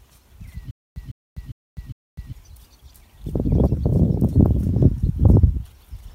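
From 0.71 to 2.33 s the audio falls into a stutter with silent gaps. A burst of about 153 ms plays, then about 252 ms of dead digital silence follows. The cycle repeats four times at a steady period of about 404 ms. Each burst is the same fragment again. The likely cause is a player or stream stalling, replaying its last buffered chunk on each retry, then running dry. Whatever should have played across that span is missing.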